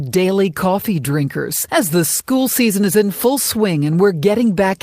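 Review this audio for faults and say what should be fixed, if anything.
Nothing stood out on listening, and there is nothing here that needs fixing.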